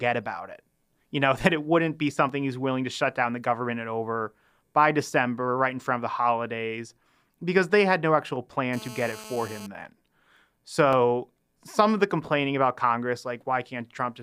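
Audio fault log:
2.29 s and 10.93 s, block of digital silence: Twice the audio program likely failed to refill its output buffer in time, and a block of zeros went out in its place. Each gap lasts about 2.7 ms, which fits a 128-sample buffer. The first falls between "that it wouldn't be" and "he's willing to shut". Because the sound drops straight to digital silence and straight back with no fade, each hole is too short to hear as a gap and comes across as a sharp tick.
8.73 to 9.67 s, GSM phone buzz: A 2G phone nearby was on a call. Its transmitter pulsed about 217 times a second, and the audio circuitry rectified those radio bursts into the signal path. Just after "they had no actual", a hard, raspy buzz appears at about 217 Hz, sitting about 17 dB below the speech. It carries a dense stack of harmonics and has no relation to the speech. It holds steady for roughly a second, as a call's bursts do, then stops.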